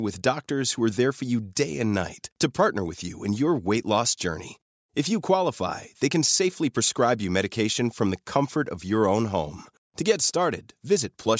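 No technical faults are audible anywhere in this speech clip.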